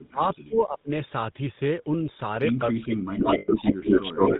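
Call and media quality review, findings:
GSM full-rate codec, whole clip: buzzy, gravelly roughness on the speech, nothing above 4 kHz, codec damage plainly audible. Character fits 13 kbps full-rate GSM, where pulse-spaced excitation keeps only every third sample and drives a vocal-tract model.

Speech suppressed in double talk, 2.7 s to clip end: speech dips and breaks into pieces, about a second and a half affected in total, deepest drops around 30 dB. Likely echo canceller unable to separate near talker from loudspeaker echo while both sides spoke, attenuating both.

Echo leak, 3.18 to 4.39 s: delayed copy of the speech, about 170 ms late and about 5 dB above the speech level, heard over the original. Likely far-side loudspeaker pickup that the echo canceller failed to remove, returned down the line.

Lost GSM frames, 3.38 to 3.49 s: sound held as a rough, metallic ring for about 100 ms. 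Consistent with several consecutive bad 20 ms frames concealed by repeating the last good frame's parameters.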